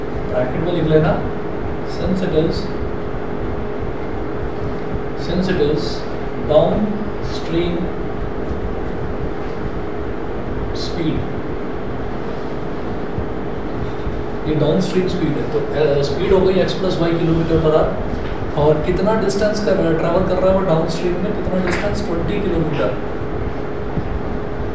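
Nothing stood out as a technical problem on listening to this audio.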